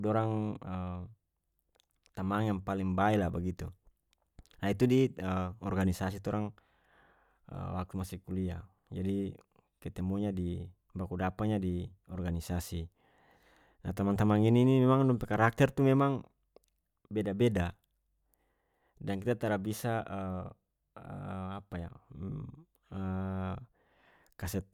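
No audible fault appears anywhere in this speech recording.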